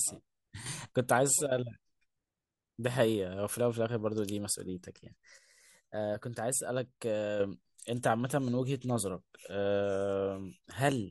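At 0.66 s the speech and its background noise step up together by about 7 dB, dropping back at 0.92 s; from 5.38 s to 7.4 s both fall by about 6 dB before returning. These are sudden gain jumps, likely a digital gain change applied between adjacent samples with no ramp. On the waveform the envelope shows sharp vertical steps at each boundary; on a spectrogram the whole frequency band brightens or darkens at once, noise floor included.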